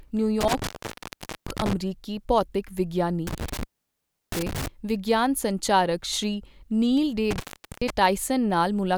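Intermittent contact drops the speech out from 0.41 to 1.73 s, 3.27 to 4.68 s, and 7.31 to 7.90 s just after "ਨੀਲ ਡੇ": a loose connection opening for roughly 0.79, 0.69 and 0.42 s, with crackle at each edge.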